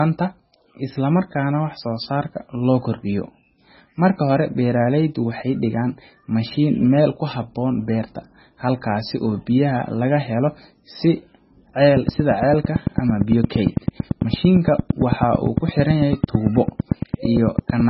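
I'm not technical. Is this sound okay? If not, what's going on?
No, it isn't. The whole recording sounds dull and very watery, and that's most likely heavy MP3 compression squeezing the file very hard. To save space, the encoder throws away everything above about 5.5 kHz, which takes the crispness off the speech, especially the s and t sounds. It also drops quiet details that flicker in and out from moment to moment, giving that swirly, underwater quality all the way through.

The second problem starts at 11.97 s and runs to 17.81 s: a train of clicks, a steady ticking at roughly nine per second, around fifty in all, each one clearly louder than the speech. They keep the same even rhythm, so they stand out both under the speech and in any gaps. This is likely interference from nearby equipment or a faulty connection injecting a pulse over and over.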